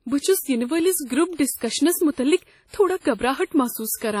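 From the start to the end, the speech carries heavy transform-codec damage, most likely WMA compression. The sound rings and smears. A washy hiss rises and falls with the speech. Quantisation noise spreads over long blocks of tens of milliseconds, and weak spectral lines drop out entirely. Nothing is left above 17.1 kHz. The depth of the damage fits a low bitrate around 32 kbps.

From 1.56 to 1.61 s there is pre-echo. A sharp attack lands late in a coding block. The noise sized for that loud attack spreads back over the quiet moment before it, across about 46 ms. A brief hiss arrives ahead of the onset. The attack itself sounds soft and smeared rather than crisp.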